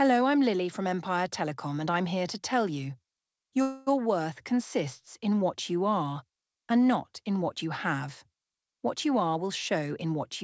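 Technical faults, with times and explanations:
3.62–3.89 s, call audio freeze: packets were likely held up and the jitter buffer ran dry, so the last sound stretches into a fading buzz or hiss for 0.25 s, then resumes where it stopped with nothing lost.
9.06–10.43 s, jitter buffer speed-up: the buffer held too much audio, so the receiver trimmed short pitch-period pieces, around a tenth of a second in all, and the sound runs 6% faster at unchanged pitch, sounding hurried.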